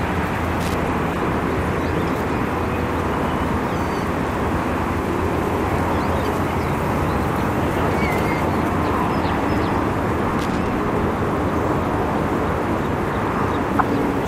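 Everyday sounds, interrupted twice by loose connector crackle, at 0.61 to 0.74 s and 10.39 to 10.67 s: irregular scratchy bursts from a contact making and breaking, visible on the waveform as jagged spikes and dropouts, and as broadband vertical streaks on a spectrogram. DAB burbling occurs at 1.09 to 1.16 s and 13.54 to 13.81 s, from bit errors slipping past error correction at a low error rate, roughly 0.3 and 0.15 percent. On a spectrogram it appears as isolated sub-band blocks flaring for up to a frame. The later burst spans many more frames than the earlier one.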